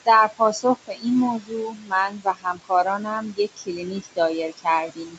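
From the start the background sinks between phrases and swells back under them. These are noise suppressor artifacts: the suppressor treats the steady room noise as something to remove and pulls those frequency bands down by about 21 dB, frame by frame.

Speech cut by the noise suppressor follows in five places: 0.28 to 1.06 s, 1.39 to 1.93 s, 2.09 to 4.18 s, 4.49 to 4.67 s, and 4.87 s to the end. Soft consonants and word endings sound swallowed or go faint. The suppressor mistakes these quieter parts of the speech for noise and drops them by about 16 to 21 dB, deepest around 21 dB in the long middle stretch. That stretch loses roughly a second in total, and the shorter spans lose a few hundred milliseconds or less.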